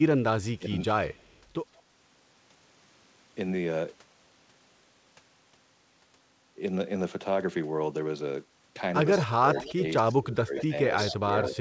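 Speech over what sounds like a wideband call link, with nothing above 8 kHz, which fits G.722 at 64 kbps. There's a brief speech suppressed in double talk dip at 0.59–0.64 s, about 15 dB down, and a longer stretch from 9.18 to 11.54 s where the voice drops by up to about 20 dB for around a second and a half in total. That's likely the echo canceller ducking the talker because both sides were talking at once. There's also echo leak, a delayed copy of the voice arriving roughly 180–187 ms late, at 1.1–1.4 s, 1.77–1.82 s, 9.18–9.73 s, 10.58–10.64 s, 11.04–11.14 s and 11.45–11.57 s. The early bits sit about 35 dB under the speech, the later ones only about 15 dB under (about 25 dB for the last), most likely the far end's loudspeaker echo slipping past its canceller.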